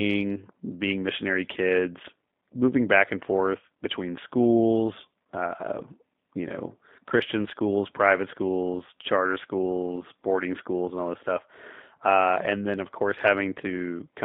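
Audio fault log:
throughout, G.729 codec: the speech passed through a low-rate G.729A-style coder, which fits an 8 kbit/s VoIP stream, rebuilt from a vocal tract filter and sparse pulses, so it sounds plainly rough and synthetic, confined to 200 Hz to 3.7 kHz.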